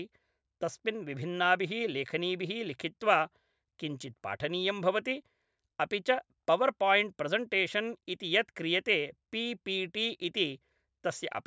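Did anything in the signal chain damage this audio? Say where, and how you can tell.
No, nothing in the signal chain damaged this audio.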